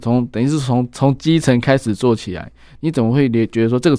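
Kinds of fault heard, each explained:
No technical fault can be heard anywhere in the recording: the signal stays continuous and undistorted, with no dropouts, clicks or level jumps.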